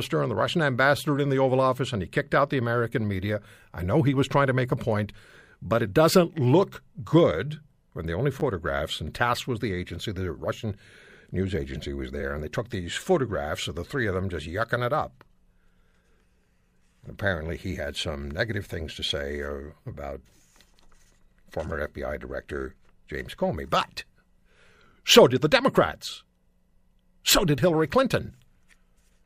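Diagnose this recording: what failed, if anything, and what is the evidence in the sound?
Repeated buffer at the driver stage: at 8.4 s ("good when the only") and 12.21 s ("news agency was"), a 10 ms slice replays twice as a brief buzz. The waveform shows identical copies, and the spectrogram shows vertical lines at each join.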